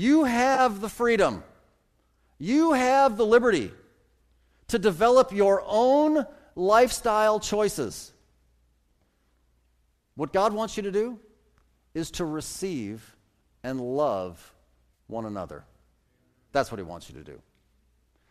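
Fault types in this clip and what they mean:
AAC frame loss with concealment: brief smeared, noisy patches just before "the freedom" and before "one another", where lost AAC frames were filled in from the last good spectrum.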